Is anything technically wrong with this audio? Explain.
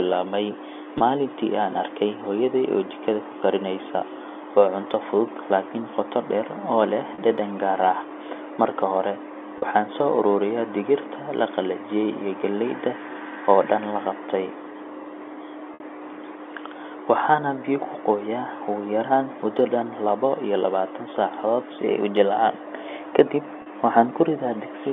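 Yes, there is packet loss with pitch repetition at 0.98–1.00 s, 7.14–7.18 s, 9.58–9.62 s, 15.74–15.80 s and 23.62–23.66 s, covering gaps of 20, 40, 40, 60 and 40 ms. The receiver filled each gap by looping the last pitch cycle, so the shorter spots sound like a brief buzzy hold, while the 60 ms gap fades into silence before the speech returns. The narrow telephone band from the G.711 coding is audible throughout.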